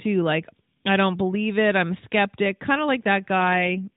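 An AMR rate drop hits this speech clip from 3.36 to 3.88 s, right after "a skeptic kind of". The narrowband band stays intact and there is no gap, but the voice turns rougher and more synthetic. This fits the codec stepping down from 12.2 to about 5.9 kbps.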